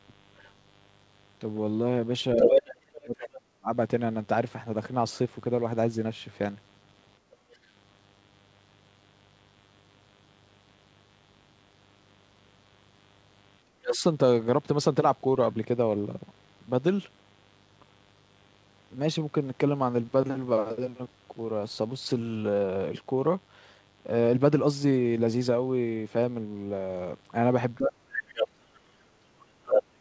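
A mains buzz runs through the whole recording, about 35 dB below the speech. Its 50 Hz hum carries a string of harmonics up into the kilohertz range, so it sounds raspy rather than a smooth low hum. That rasp points to sharp switching spikes, twice per mains cycle, from a dimmer, a rectifier or an unshielded cable. It stays steady whether or not anyone is talking, which separates it from the call-related faults.

From 0.37 to 3.27 s, the other side's voice leaks through, likely because a loudspeaker on the talker's end played it back into the microphone and the echo canceller failed to remove it. The leaked voice is roughly as loud as the talker or a little louder. It is a second person rather than a reverberant copy of the talker.

Overlapping that, from 2.35 to 3.7 s, the speech is suppressed in double talk. With both sides speaking, the canceller likely could not separate the two and pulled the microphone down by as much as roughly 40 dB. 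The talker dips for about a second and a half.

From 7.19 to 7.52 s, the background is gated by the echo canceller. The room sound drops by about 9 dB for some 0.3 s and then returns. A faint scrap of far-end voice slips through right after, from 7.52 to 7.56 s, about 35 dB down.

Double-talk suppression returns from 13.65 to 14.03 s, with a short, louder leak at 13.92 to 13.96 s. From 27.75 s to the end, the far-end voice leaks in strongly again, and from 27.78 s the talker is pushed down at the same time.

Throughout, nothing is heard above 8 kHz, which fits a wideband call codec such as G.722.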